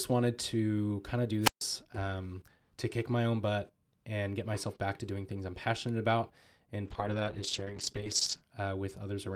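Two problems show up in this speech recording. At 1.41 s, right after "to kind of do", there's a wireless microphone squelch dropout. The radio link fades, hiss swells briefly, and then the receiver's squelch mutes everything for about 0.14 s before the voice comes back at 1.63 s with "um to kick my". Later, from 6.9 s to 8.53 s, a call bitrate drop makes the sound go rough and muffled, with the top end stripped away. That's the encoder starved of bits after the bandwidth estimate fell, and it fits a slide from around 48 kbps down to roughly 9 kbps, bottoming out for about 1.55 s before recovering.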